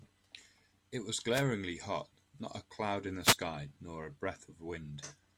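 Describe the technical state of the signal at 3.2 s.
A wireless microphone noise hit runs from 3.22 to 3.37 s: the radio link fades, receiver noise swells into a brief static swish, showing as a broadband smear across the spectrogram.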